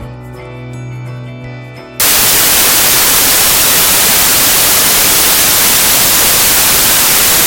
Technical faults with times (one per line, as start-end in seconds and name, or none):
2.00-7.47 samples built from the wrong bytes